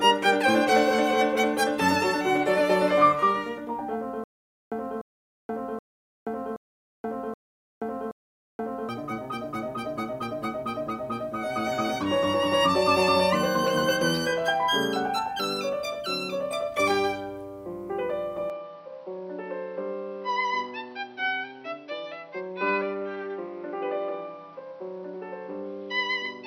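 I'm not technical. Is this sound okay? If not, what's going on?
No. From 4.24 to 8.89 s the music has a stutter with silent gaps: a 0.3-second snippet plays, then about half a second of dead silence, repeating six times every 0.77 s. The player likely stalled and replayed its last fragment, so that stretch is lost.

From 18.50 s to the end, the input switched to a poorer device, likely a different microphone or headset. There's no gap or volume jump, but everything above 5.9 kHz disappears, dulling the music, and a faint new background noise appears.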